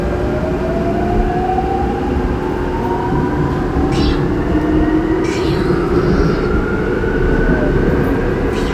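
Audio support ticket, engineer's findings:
Engineer's findings: no fault found in the audio for this ticket.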